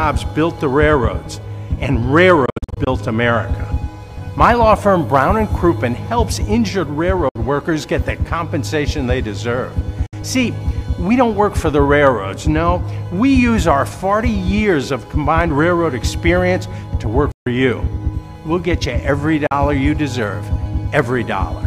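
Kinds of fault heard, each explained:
Hard clipping: Some stage in the chain was driven about 2 dB past the largest level it could pass, so the tops of the waveform were sliced flat instead of following their natural curve. Those squared peaks add a spray of high harmonics, heard as brief crackle and edge on the loudest moments, from 2.17 to 2.32 s and again from 5.15 to 5.22 s. With so little overdrive, it is a short roughness rather than continuous fuzz.
Bluetooth dropout: Audio data most likely failed to reach the wireless headphones in time and was discarded, so playback fell silent until good data arrived, then carried on as if nothing had been skipped. The worst patch runs from 2.46 to 2.87 s, where about 220 ms vanish in scattered holes, the longest about 61 ms. Single gaps follow at 7.29 s (61 ms), 10.06 s (61 ms), 17.31 s (142 ms), and 19.47 s (41 ms).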